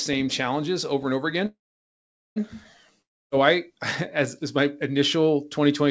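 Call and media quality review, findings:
Call audio freeze, 1.46–2.38 s, after "challenges over and over". Last sound briefly buzzes, then about 0.81 s of silence. Likely a stalled jitter buffer. Speech resumes where it stopped, 0.9 s late.

Long network dropout, 3.02–3.33 s. Short fading tail, then near-silence. Speech returns with roughly 0.3 s missing. Likely lost packets, not just delayed. G.722 band ends at 8 kHz.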